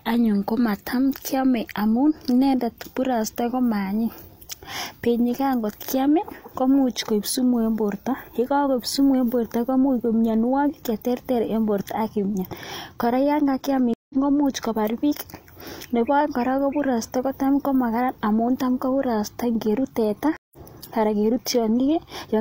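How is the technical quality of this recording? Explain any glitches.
Two dropouts interrupt the speech, both from a stream reconnect. At 13.94 to 14.14 s the sound cuts to about 160 ms of silence and comes back roughly a fifth of a second further on, so a fragment is skipped. At 20.37 to 20.58 s a similar gap of about 160 ms ends with a smaller jump of around a tenth of a second. In each case the connection dropped, the player went quiet, then rejoined the live stream with a freshly started decoder, resuming later than where it left off and easing back in over the first frame or so.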